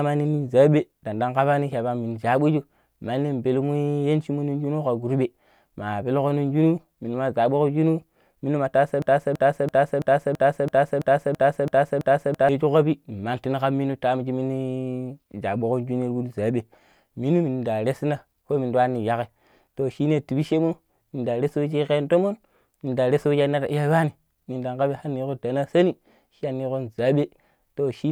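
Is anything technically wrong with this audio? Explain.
Yes. A broken-record loop runs from 9.02 to 12.49 s. The speech stops moving forward and a single 0.33 s fragment plays ten times back to back, each repeat identical, giving a stuttering, machine-like chatter. This is likely a stall in the player, encoder or stream that kept resending the last piece of audio it held. Whatever should have been heard during those three and a half seconds is missing.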